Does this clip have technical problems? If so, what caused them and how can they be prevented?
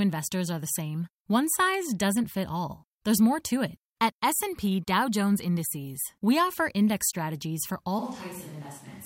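Yes. At 7.99 s, after "offer index strategies for", the speech turns roomy, thinner and about 5 dB quieter, with more background noise to the end. This is likely a switch to a distant microphone. Monitoring the close microphone and keeping a backup recorder on it would prevent this.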